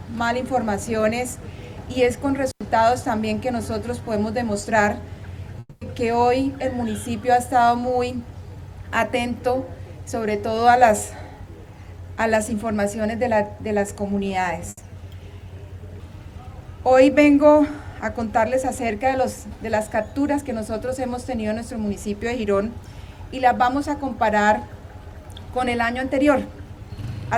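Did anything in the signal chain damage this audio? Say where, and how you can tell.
Yes. At 2.50 to 2.62 s the sound cuts out for about 92 ms, with crackle at both edges and only faint hiss in between. That is an intermittent contact in the analogue wiring: a loose cable or plug briefly lost connection, then reseated.

From 5.59 to 5.83 s the last sound is stretched into a fading buzz or hiss that ends in about 40 ms of silence, about 220 ms in all. It resumes further on with 220 ms absent. This is likely a long network dropout, with the receiver concealing audio that never arrived.

Around 14.69 to 14.79 s the sound briefly holds and fades for about 80 ms, then picks up further along with that 80 ms gone. That is a burst of packet loss on the network: consecutive packets were lost or late, and the receiver filled the gap by extending and attenuating the previous sound.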